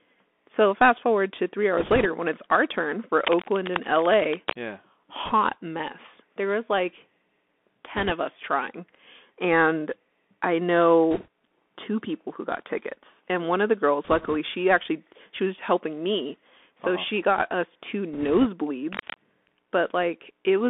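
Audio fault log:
Throughout: Bluetooth CVSD headset codec. Speech is confined to roughly 250 Hz to 3.5 kHz, consistent with a 64 kbps CVSD link. Its one-bit adaptive steps leave plainly audible granular hiss and scratchy sibilants.
1.78–2.06, 5.25–5.33, 7.97–8.12, 11.11–11.28, 14.04–14.36, 18.13–18.46 s: bit errors on a Bluetooth voice link. Flipped bits leave rushing crackle rather than clicks, heaviest in the first burst after "fast forward to three".
3.21–4.58 and 18.92–19.16 s: cable scratch noise. Dense, uneven scratching, about 5 dB below the speech, starts after "when it's our turn", likely from a worn, shifting contact.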